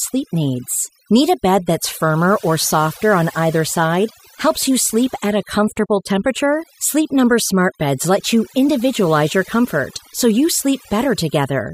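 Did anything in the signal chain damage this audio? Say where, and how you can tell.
Yes. The damage comes from a processing stage: overdone noise removal, present for the whole speech clip. Between phrases the background drops to near silence but keeps twinkling specks. A noise reducer set too aggressively pushes individual frequency bands down or off whenever they approach its noise estimate. Isolated bands that survive become the specks, and quieter parts of the voice get removed along with the noise.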